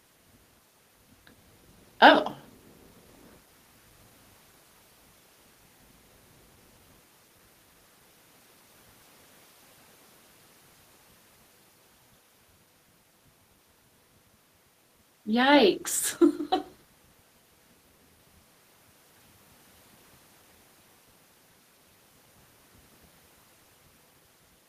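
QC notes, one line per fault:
Nothing stood out on listening, so there is nothing to log for this recording.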